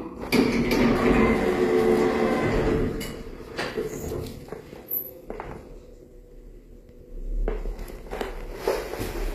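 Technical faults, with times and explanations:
Throughout, HE-AAC compression: the damage is plainly audible, with a hard ceiling at about 14.9 kHz and treble that sounds bright but synthetic, turning gritty and metallic because the upper band is rebuilt from copied lower bands and its harmonics no longer line up with those below. A plain low-pass filter would leave the top dull, and ordinary AAC or MP3 would leave swirling gaps. This points to a low bitrate, likely around 24 kbps.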